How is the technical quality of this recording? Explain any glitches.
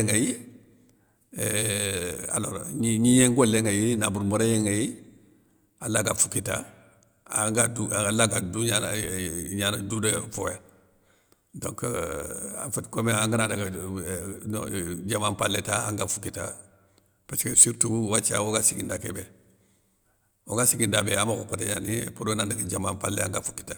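The signal stays continuous and stable throughout, with no glitches to explain.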